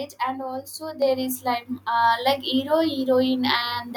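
A speech clip in which the whole sound, voice and background together, jumps abruptly louder at about 1.02 s, right after "and also", and stays at the new level. The step is about 6 dB and happens within roughly 10 ms, so it lands mid-phrase as a sudden lift rather than a fade. This is the microphone volume stepped up: the call software judged the input too quiet and raised the device's input volume in a single step, boosting everything the microphone picks up at once.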